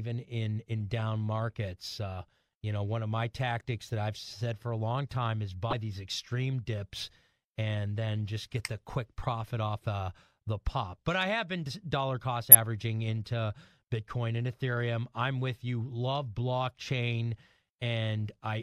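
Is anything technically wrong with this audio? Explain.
Yes. The speech contains two short glitches from damaged data in a compressed stream, at 5.70 to 5.73 s and at 12.52 to 12.55 s, each lasting just over 30 ms. At those points part of the encoded data was lost or corrupted, so the decoder misread the affected frames, lost sync and had to hunt for the next valid frame header. Each one is heard as a brief chirp, squawk, click or short hole breaking into the speech.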